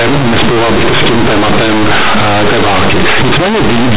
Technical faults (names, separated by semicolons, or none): companded audio read as linear